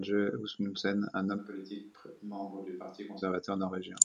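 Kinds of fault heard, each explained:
Switch to a distant microphone, 1.40 to 3.20 s: the speech abruptly turns roomy and hollow, loses its low end and drops by about 10 dB, while background noise rises to roughly 30 dB below the speech. At 3.20 s the close, full sound snaps straight back. The likely cause is that the close microphone's feed dropped out and a pickup much farther from the talker, hearing more of the room, covered that stretch.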